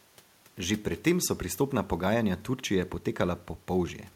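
Listening through the speech, nothing stood out as a technical problem, and the faint room noise sits about 36 dB below the voice as part of the recording.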